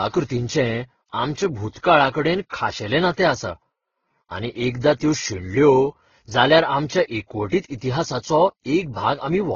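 Throughout, speech stops at 6.9 kHz and carries two overlapping kinds of compression smear, likely transcoding between lossy codecs, fitting a low-rate Vorbis-then-Opus chain.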